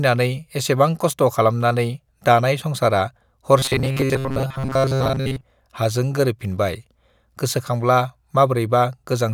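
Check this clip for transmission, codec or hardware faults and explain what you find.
There's one fault in the speech, from about 3.59 to 5.44 s: robotic sound from repeated short buffers. The likely cause is audio arriving too slowly, so the player keeps looping the last chunk it has, around 7.5 ms long, for most of that stretch while real audio gets skipped. That fixed repeat imposes a steady 134 Hz buzz, so the voice turns into a stiff, metallic buzz that only loosely tracks the speech.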